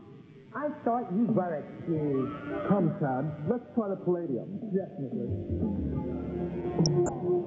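Throughout, the sound is dull, with a steady gurgling, granular texture and flickering upper bands, most likely MP2 compression at a low rate, around 80 kbps. From 6.83 to 7.13 s, DAB burbling breaks through across 16 frames. Unlike the constant codec dullness, these are short blips of noise in single sub-bands, caused by a small fraction of bit errors, roughly 0.2%, corrupting the audio frames.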